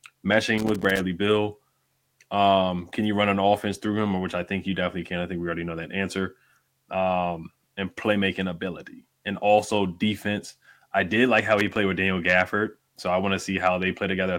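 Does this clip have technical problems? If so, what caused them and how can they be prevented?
Yes. Two irregular bursts of crackle and scratching break into the speech, the first from 0.58 to 0.99 s and the second from 11.59 to 11.78 s, just after "I did like how". This is loose connector crackle: a worn or dirty contact in the cable path opens and closes rapidly as it shifts, chopping the signal. Cleaning or replacing the connector and securing the cable so it cannot move would prevent it.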